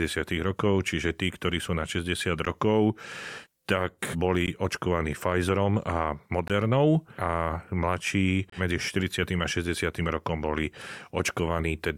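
Short hard-edged silences at 2.45, 4.47, 6.48 and 8.50 to 8.52 s are gaps between stream segments. Each 2 s segment's timestamps leave 12 to 25 ms unfilled, so the speech drops out briefly at each boundary.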